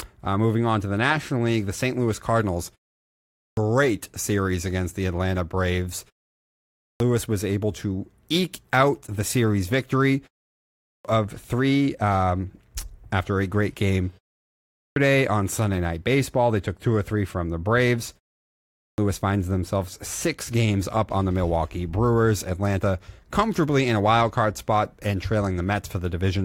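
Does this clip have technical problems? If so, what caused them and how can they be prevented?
Yes. There is a clipped start after a pause: the output device sleeps during short pauses and wakes late, swallowing roughly half a second of speech at 3.13, 6.48, 10.56 (before "of three um after"), 14.51 and 18.53 s. Keeping the output stream active through silence, or disabling the device's power-saving idle mode, prevents this.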